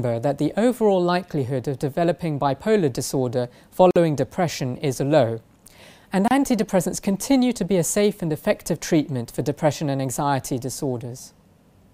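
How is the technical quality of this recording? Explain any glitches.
Two brief dropouts mar an otherwise continuous recording. At 3.91 s and 6.28 s there is a gap at a join of encoded pieces, about 49 ms and 30 ms long. Separately encoded segments were spliced without trimming their start delay and end padding, so the sound falls away over smeared edges into a short silence, then resumes where it left off.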